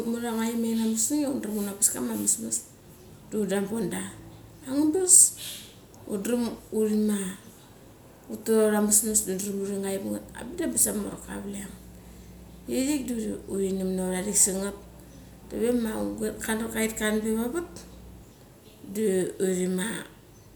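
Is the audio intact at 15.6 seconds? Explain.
No, a steady low 60 Hz drone sits under the speech from 10.22 to 18.22 s, roughly 20 dB down. This mains hum comes from power-line coupling through a ground loop or nearby transformer.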